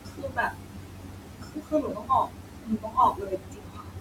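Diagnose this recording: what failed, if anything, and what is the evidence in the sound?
The background pumps down between phrases and swells back under the speech. These are noise suppressor artifacts from call processing: frame-by-frame gain cuts on bands judged steady noise, acting on room noise about 18 dB below the speech.

From 0.0 to 4.0 s, soft consonants and word endings sound swallowed and faint, dropping by about 19 dB at worst. This is speech cut by the noise suppressor, also at the call-processing stage: quiet speech energy was mistaken for noise and turned down with the background.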